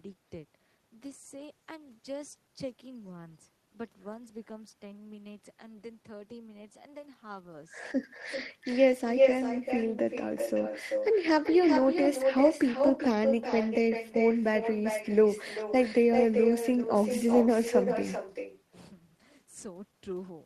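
From start to finish, every phrase is followed by a distinct second copy arriving roughly 0.4 s later and about 6 dB quieter and thinner than the original: echo with no canceller. The far end is playing the call through a loudspeaker, its microphone captures that playback, and nothing subtracts it before it travels back. Unlike room reverberation, which smears into a continuous tail, this returns as a separate, delayed repeat of the speech.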